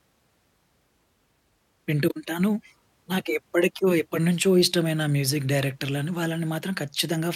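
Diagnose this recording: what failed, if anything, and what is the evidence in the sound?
Nothing failed here: listening through the recording, there's no audible evidence of trouble anywhere along the chain, so there's nothing to diagnose.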